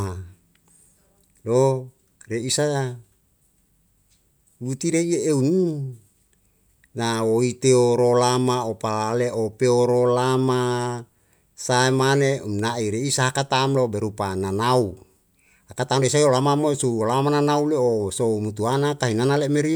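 No technical faults are audible.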